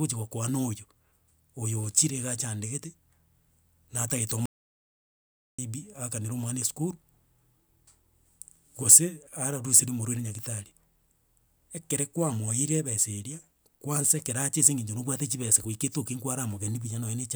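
Speech, with one clear audio dropout to silence running from about 4.46 s to 5.59 s, so roughly 1.13 s of the recording is simply gone. The sound cuts off mid-flow and comes back just as abruptly, and the gap in between is silent with no room tone at all. That points to the input likely being lost for a moment, say a loose connection, a failed link or a stray mute, while the recorder kept writing silence.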